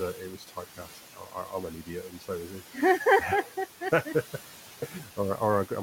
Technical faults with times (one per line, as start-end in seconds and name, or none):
0.00-5.82 noise suppressor artifacts
0.37-1.53 speech cut by the noise suppressor
1.86-2.29 speech cut by the noise suppressor
4.87-5.18 speech cut by the noise suppressor